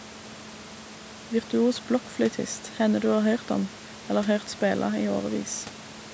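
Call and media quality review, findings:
Nothing to flag on this speech clip; there's some room noise sitting about 16 dB under the talker, and the call microphone processing tops out at 8 kHz, both exactly as expected for this path.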